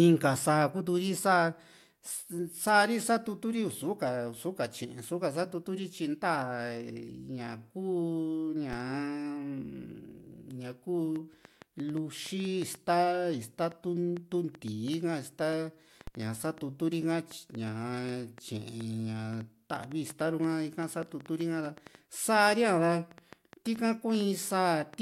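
A DC step at 8.73 s shifts the waveform's zero line abruptly by about −29 dBFS, as when a converter recalibrates or an offset input is switched in. The offset then bleeds away as a 20 Hz high-pass would remove it, so the jump is heard as a single low thump while the speech runs on unaffected.

A train of clicks begins at 11.16 s and continues to 24.95 s: some fifty sharp, similarly shaped pulses arriving at an irregular pace of about 4.2 per second, peaking about 5 dB above the speech. They sound like uneven ticking laid over the speech and through its pauses, likely from interference by nearby equipment or a faulty connection or power supply.

Inside that stretch, at 16.07 s, a second DC step of the same size, about −29 dBFS, lands as another low thump and decays the same way.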